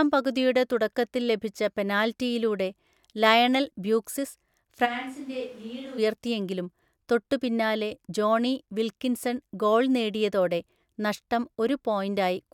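From 4.87 to 5.97 s, the speech abruptly turns roomy and hollow, and the low end thins out. This is a switch to a distant microphone. The close microphone's signal likely dropped out, leaving only a pickup farther from the talker. The level falls by roughly 10 dB. Room noise rises to about 25 dB below the speech. At 5.97 s the close, full sound snaps back just as suddenly.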